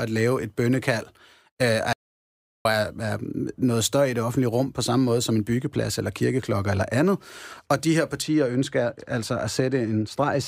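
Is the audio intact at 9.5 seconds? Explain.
No. At 9.5 seconds the speech is caught in a stretch of de-emphasis applied wrongly, running from 8.22 s, just after "de her", to the end at 10.48 s. A treble cut meant to undo pre-emphasis lands on audio that never had any, or is applied twice. Highs slope away, about 14 dB down at 10 kHz. The sound turns dull and muffled.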